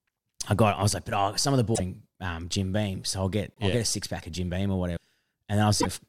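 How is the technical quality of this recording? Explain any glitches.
The speech has four short glitches. At 1.74 to 1.80 s, just after "oh some of the", and at 3.54 to 3.59 s, after "so I'll get", the sound jumps ahead and briefly garbles. The same happens at 4.96 to 4.98 s and 5.80 to 5.86 s. The likely cause is a broken MP3 bit reservoir. Frames went missing, and the next frames looked back for borrowed data that was no longer there. The lengths fit one to three 24 ms frames decoding wrongly.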